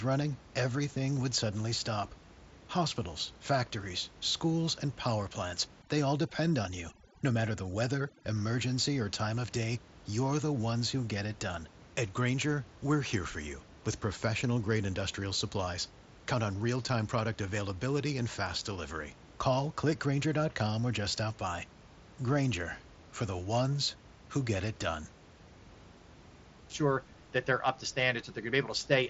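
Speech clip with overdone noise removal from 5.82 to 8.35 s, after "schools and power plants" and before "emergency or time of": an overly aggressive suppressor cuts noise-adjacent bands, leaving a lowered background broken into twinkling specks.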